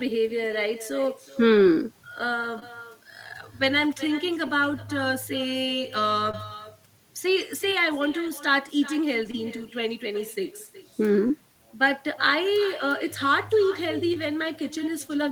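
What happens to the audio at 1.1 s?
With no echo canceller on the far end, the loudspeaker feeds the microphone, so at 1.1 s, as throughout, speech returns around 400 ms later, about 16 dB quieter and thin.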